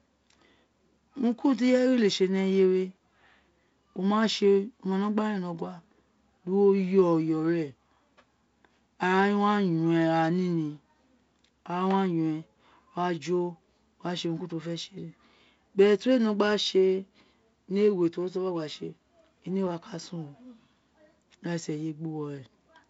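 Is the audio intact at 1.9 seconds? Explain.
Yes, at 1.9 seconds the speech runs intact with no dropout, click or distortion, carried by G.722 wideband telephone coding at what sounds like 48 kbit/s, which leaves a faint hiss and no content above about 7.7 kHz.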